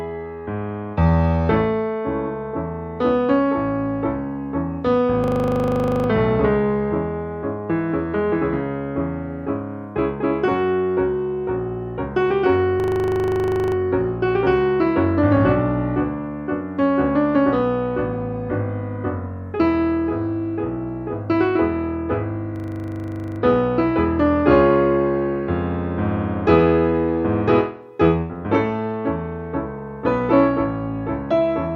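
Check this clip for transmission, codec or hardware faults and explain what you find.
Three system hang loops occur, at 5.24–6.08 s, 12.80–13.76 s and 22.56–23.40 s. Each time the system stalled while the hardware kept replaying a 40 ms buffer, giving a rough 25 Hz buzzing stutter. The waveform shows identical 40 ms blocks, and the spectrogram shows evenly spaced vertical striping.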